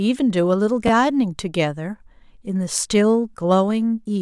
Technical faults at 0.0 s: none

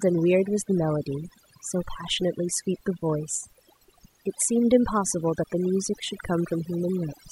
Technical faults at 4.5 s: overdone noise removal

